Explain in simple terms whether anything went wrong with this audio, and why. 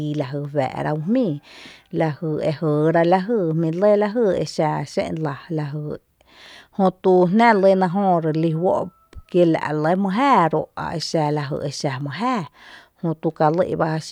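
Nothing went wrong here that you'd notice: the speech comes across steady and unbroken, with no odd sounds or gaps anywhere along the way.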